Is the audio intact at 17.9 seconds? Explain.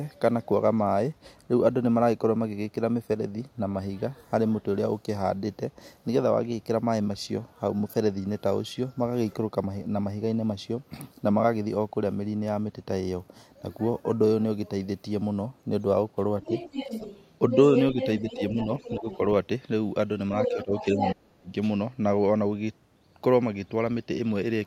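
No. From 17.5 to 19.18 s there is other side's voice leaking through: a second voice sits only a few decibels under the main speech, most likely far-end loudspeaker sound reaching the microphone that the echo canceller failed to remove.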